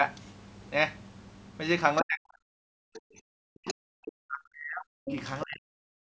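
At 0.25–0.31 s, the echo canceller likely leaves loudspeaker sound in the microphone, so a faint scrap of the other side's voice leaks through, far below the speech. From 2.01 to 2.41 s, speech is suppressed in double talk. The canceller likely mistakes the talker for echo and pulls the voice down by as much as 40 dB. From 2.69 to 3.06 s, the background is gated by the echo canceller: it clamps the microphone and the room sound drops by about 40 dB. Inside that dip, at 2.94–3.00 s, a stronger leak of the other side's voice likely slips past the canceller. Double-talk suppression likely strikes again from 3.34 to 5.10 s, pulling the voice down for about one and a half seconds. Leaks at 3.67–3.74 s and 5.07–5.14 s, each likely residual echo, grow steadily louder, and the last sits about 10 dB beneath the speech. A final suppression in double talk, likely the same confusion, drops the voice from 5.44 to 5.93 s.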